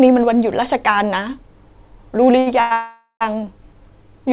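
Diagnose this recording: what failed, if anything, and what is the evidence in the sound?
A short stall from a late packet sits at the network and jitter-buffer stage, from 2.39 to 2.48 s. A packet missed its playout time, the buffer ran dry, and the receiver held the last sound for about 70 ms until the packet arrived. Playback then resumed exactly where it had stopped, so nothing is lost but the delay grows by 70 ms. On a spectrogram the harmonics run flat and smeared across that span. The waveform shows a repeated, slightly dipping cycle.

A call audio freeze follows, from 2.60 to 2.73 s and then from 2.73 to 3.23 s, likely caused by packets held up in transit. The receiver filled the first wait, about 103 ms, and then a further 481 ms with a continuation of the last sound that decays into a fading buzz. About 90 ms of the second stretch is true silence. Speech resumes where it left off, delayed but intact. 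The spectrogram shows the bands fading to a blank column, all below the 4 kHz ceiling of the G.711 mu-law call path.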